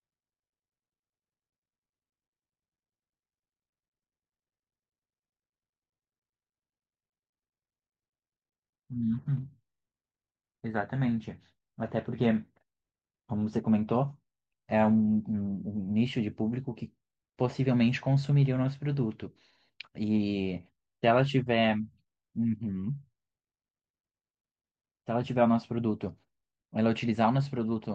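No technical faults occur at any point in the recording.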